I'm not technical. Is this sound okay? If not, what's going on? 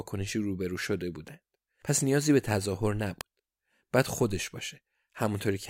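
No. At 3.21 seconds there is a sharp snap laid over the speech. It is very brief, far shorter than a blink. This is an electrical switching spike. The likely cause is a nearby switch, motor or static discharge. A tiny electrical arc like that can jump into the audio wiring. It then gets recorded as a crack on top of the speech.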